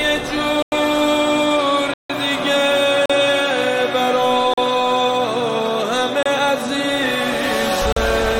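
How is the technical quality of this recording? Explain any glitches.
The recording has six dropouts. Blocks of digital silence occur at 0.62–0.72 s, 1.94–2.10 s, 3.06–3.10 s, 4.54–4.58 s, 6.23–6.26 s and 7.92–7.96 s, ranging from 28 to 160 ms. In each, the sound drops abruptly to silence and returns without a fade, which points to an output buffer not filled in time. The longer gaps at 0.62 s and 1.94 s are heard as brief holes.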